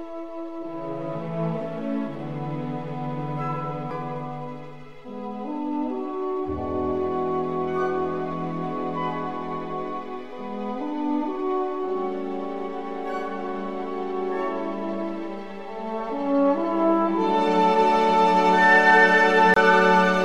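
At 3.91 s and from 19.54 to 19.56 s, a CD skip: the laser jumps to another turn of the spiral, so a tick and brief mute (a few milliseconds, then about 20 ms) precede sound resuming elsewhere. A plain dropout would continue without a jump.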